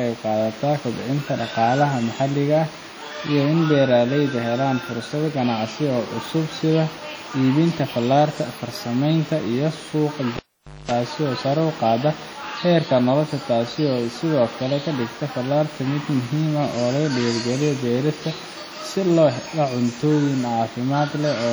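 Speech recorded through a chain that was likely squeezed by WMA compression at a low bitrate, consistent with roughly 32 kbps, leaves heavy ringing, washy smearing and hiss that breathes with the voice, though content still reaches 20.1 kHz. A live cable pulled and plugged in between 10.37 and 10.91 s causes a pop and about 0.5 s of near silence, including a 0.22 s burst of 50 Hz mains buzz, then a second pop as sound returns.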